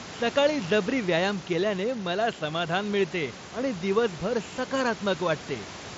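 No technical faults occur in this speech recording: room noise sits about 17 dB below the speech, and the Bluetooth mSBC headset codec carries the speech up to 8 kHz with only light grainy texture on louder sounds.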